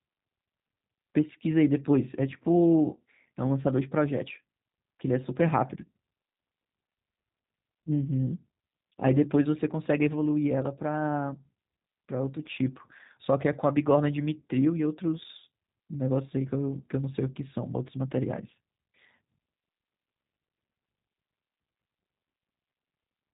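Speech passed throughout through a G.729 codec, which fits 8 kbit/s G.729A: it rebuilds each frame from a filter, pitch predictor and sparse pulses, so nothing above 3.8 kHz passes and the sound is plainly rough and synthetic.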